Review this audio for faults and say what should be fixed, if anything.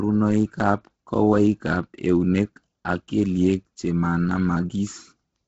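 Throughout the speech the top end is missing above 7.8 kHz, with grainy, breathy noise where fine upper detail should be, likely from Bluetooth LC3 compression at a low rate that fits about 16 kbps with 10 ms frames. A spectrogram shows a hard ceiling and smeared, speckled blocks below it. Prevent this by recording over a wired path or a higher-bitrate link.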